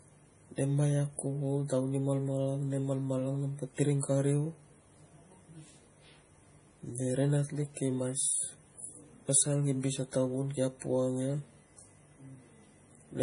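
Speech clip with heavy MP3 compression damage throughout, likely from low-bitrate encoding around 32 kbps. Nothing remains above 10.6 kHz, and weak spectral detail flickers between frames, giving a watery, swirly texture, metallic chirps on s sounds, and smeared attacks.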